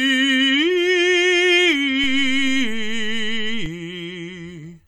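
At 2.04 s the music gets a DC step. The waveform's zero line suddenly shifts, by about -22 dBFS. This jump sounds like a low thump. The offset holds until 3.66 s, then steps back with a second thump. The music itself continues unchanged.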